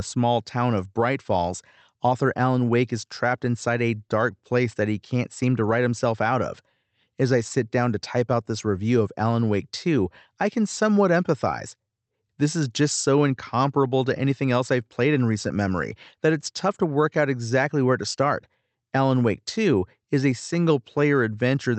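No technical faults can be heard in the speech. It has passed through a call codec and jitter buffer that are working as expected, with the high end stopping at around 8 kHz, which fits a wideband Opus setting.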